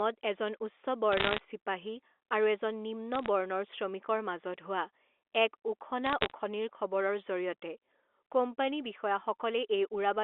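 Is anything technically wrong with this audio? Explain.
Yes. There are bit errors on a digital phone line in three bursts: 1.12 to 1.38 s, 3.14 to 3.28 s and 6.06 to 6.31 s. On this G.711 mu-law link, corrupted bits alter individual 8-bit samples. Because the scale is logarithmic, a flipped high-order bit, or a flipped sign on a loud sample, throws a sample far from its true value. The first burst is densest, with an error rate somewhere under one percent; the later two run lower. The result is brief patches of sharp ticks and crackle sitting on top of the intact, 300 Hz to 3.5 kHz telephone-band speech.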